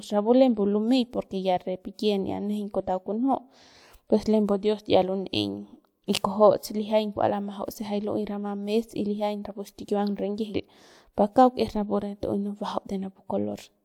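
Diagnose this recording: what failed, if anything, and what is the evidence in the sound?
Nothing in this speech recording points to a failure at any stage of the chain. No stage leaves evidence in the sound that calls for a diagnosis.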